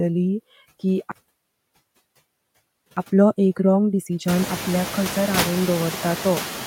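Noise suppressor artifacts run through the whole clip. The suppressor cuts what it judges to be steady noise by about 16 dB, band by band and frame by frame. The background dips between phrases and swells under the speech.

At 1.12 s the sound stops dead. This is a playback stall lasting 1.85 s, until 2.97 s. The player likely ran out of data or was briefly blocked. The output goes silent until the player recovers.

From 2.97 s to 5.97 s comes time-compressed catch-up. The player drops and cross-fades small slices to clear its backlog, running at 1.15 times normal speed. The speech sounds hurried but keeps its pitch. Around 4.5 s the room noise rises by about 24 dB, to about 10 dB below the speech.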